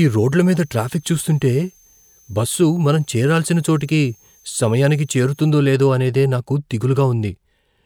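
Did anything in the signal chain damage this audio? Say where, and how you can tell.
Yes. A switching supply whistle sits in the analogue power and wiring stage from 0.00 to 5.50 s, ending just before "లేదో అనేదే నాకు". It is a thin, high whine, gliding between about 6.06 and 6.60 kHz and roughly 35 dB below the speech. A switch-mode supply dropping into an audible burst mode, or beating against a second supply, leaks its ripple into the audio ground or supply rail. The pitch wanders as the load shifts.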